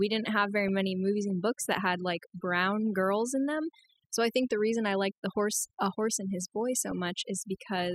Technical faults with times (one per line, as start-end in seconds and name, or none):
0.00-7.95 overdone noise removal
0.00-7.95 MP2 compression
0.60-0.69 DAB burbling
6.91 DAB burbling